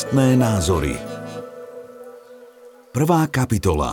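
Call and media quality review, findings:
No audible defects found across the clip; nothing to attribute to capture, transport or playback.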